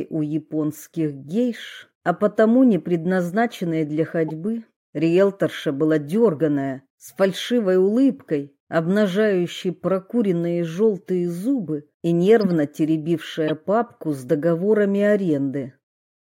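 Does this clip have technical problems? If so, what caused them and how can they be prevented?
Yes. There are three short chirps from a corrupt frame decoded: at 4.28 to 4.30 s, at 12.41 to 12.47 s, and at 13.48 to 13.50 s. Bits inside compressed frames got flipped, and the decoder played those frames anyway. The misread gains and codes put energy at frequencies where it doesn't belong, so each hit comes out as a squeaky blip. The first reaches roughly -20 dBFS and the later two get up near -15. The middle one lasts longest, which suggests a run of several damaged frames, while the last sounds like a single bad frame. To prevent it, protect the stream with checksums or error correction so the decoder can detect damaged frames and conceal them instead of playing them.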